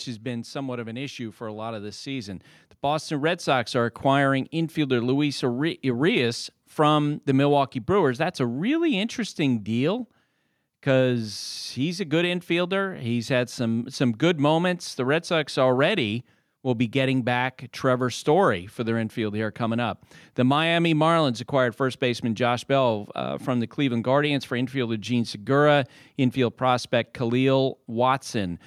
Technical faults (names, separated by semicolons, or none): automatic gain rising